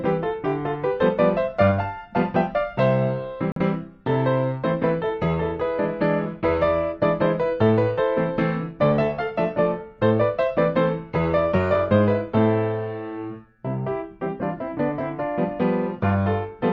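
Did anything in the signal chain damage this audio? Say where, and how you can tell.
Yes: a corrupt frame was muted from 3.52 to 3.61 s, at the codec decoding stage. The sound drops abruptly into an 86 ms hole of silence, which fits one compressed frame that failed decoding and was replaced with silence. Timing on either side stays intact.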